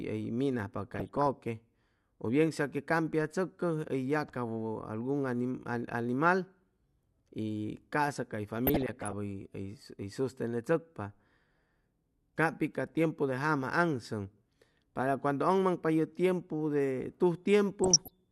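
DAB burbling occurs at 0.94–1.27 s, 8.67–9.13 s after "ca'sa cay", and 17.84–18.10 s. Residual bit errors of a fraction of a percent corrupt single sub-bands, giving squelchy, bubbling chirps that a spectrogram shows as scattered bright frame-length blocks.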